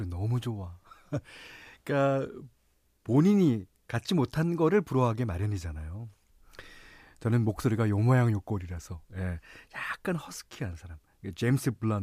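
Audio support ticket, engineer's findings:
No faults found in this speech recording. Nothing to report against any component of the signal path.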